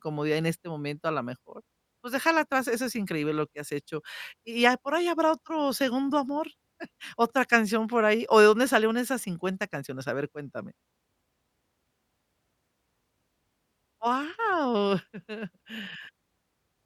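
No technical faults can be heard anywhere in this recording.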